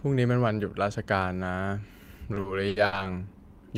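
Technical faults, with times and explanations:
2.17–2.94 s, repeated stalls (stutter): The sound catches and drags five times in under a second. Audio arrived late or too slowly to keep up with playback. The jitter buffer emptied again and again. Each time, the receiver stretched the last sound to cover the wait. About 210 ms was filled this way, roughly a quarter of the span. The longest hold lasts 80 ms. Nothing is lost, but the delivery stumbles and slows.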